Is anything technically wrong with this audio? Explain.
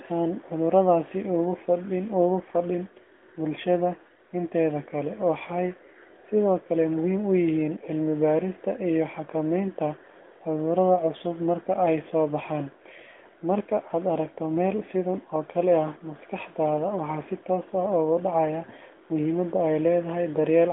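No, nothing's wrong here; it's just speech carried over a narrowband mobile phone line, so the sound stops at about 3.8 kHz the way a normal call does.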